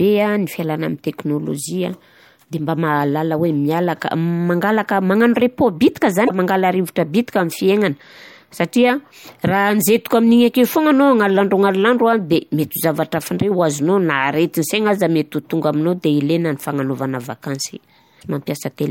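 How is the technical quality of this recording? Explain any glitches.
The speech has two brief glitches. Damaged data in a compressed stream hits at 6.25–6.31 s and 18.18–18.23 s: corrupted bytes throw the decoder off sync.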